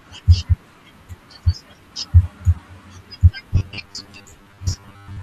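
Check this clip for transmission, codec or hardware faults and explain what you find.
Two faults turn up, both past the middle of the speech or close to it.

At 2.55 to 2.58 s there's a corrupt frame decoded. A couple of damaged compressed frames were played anyway, so misread gains and codes drop energy at the wrong frequencies. You hear it as a short chirp, squeak, blip or burst of noise, peaking around -30 dBFS.

From 3.54 s to the end at 5.22 s, there's robotic sound from repeated short buffers. The likely cause is audio arriving too slowly, so the software keeps replaying the last chunk, about half of it repeated. The buzz sits at 100 Hz, which fits a 10 ms buffer, and the voice turns metallic and rigid while still roughly tracking the speech.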